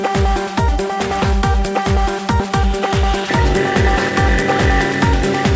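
At 2.40 s the audio jumps forward abruptly, with no gap of silence at the join: what comes before and after are butted almost directly together, and a stretch of roughly 0.7 s never plays. This is a skip ahead. Either that audio was lost on the way or the jitter buffer overflowed and threw it away while later audio was already queued. The receiver simply resumed from the newer material, so the delay shrank by about the same amount.

From 2.49 s to 4.44 s the sound runs noticeably quicker than normal, at about 105% speed, with its pitch unchanged, and it comes across as hurried. This is a jitter buffer speed-up. The buffer was holding more audio than its target, so the receiver trimmed out many short slices, each one to a few pitch periods long. Across that stretch it removed roughly a tenth of a second in total to bring the delay back down. The clip reached the listener over a G.722 call path at 64 kbps, which is why nothing can be heard above 8 kHz.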